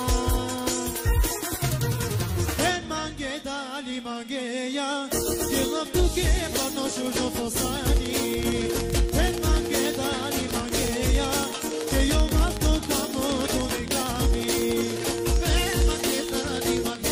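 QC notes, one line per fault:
7.88–17.06 s, train of clicks: likely interference or a faulty connection injecting similar pulses at a regular 10.7 per second, heard as steady ticking standing well above the sound.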